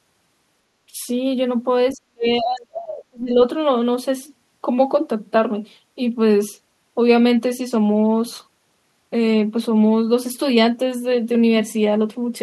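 At 0.88 s the speech dips briefly, for less than a tenth of a second, by around 15 dB. From 1.93 to 3.38 s it drops much harder, by roughly 40 dB, and nearly vanishes in patches. This is speech suppressed in double talk, likely caused by an echo canceller turning down the near talker while the far side spoke. It could not tell this talker from the loudspeaker echo.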